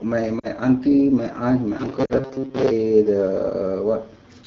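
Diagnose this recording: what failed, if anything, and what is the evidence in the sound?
The speech was coded with AMR wideband (HD Voice) at 8.85 kbit/s, one of its lowest rates, leaving the sound rough and raspy throughout.

Two runs of two lost AMR speech frames, about 40 ms per run, at 0.39 to 0.47 s and 2.05 to 2.13 s made the decoder extrapolate, causing the sound to drop to near silence, with the voice coming back weak or rough for a moment.

From 1.78 to 2.71 s there is robotic sound, a metallic 133 Hz buzz, likely from repeated short buffers of about 7.5 ms replacing roughly half the audio.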